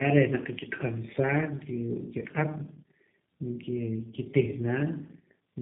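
Tandem speech coding runs through the whole clip: the speech passed through two low-rate speech codecs in succession, consistent with AMR-NB and then G.729A, with each coder re-encoding the other's errors. The result is rough, muffled and warbly, with nothing above 3.7 kHz.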